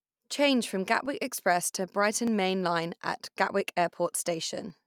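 From 1.06 to 4.70 s, clicks recur every 1.22 s, about four in all. Their steady spacing marks them as clock drift buffer slips, likely from roughly 500 ppm mismatch dropping or repeating a few dozen samples.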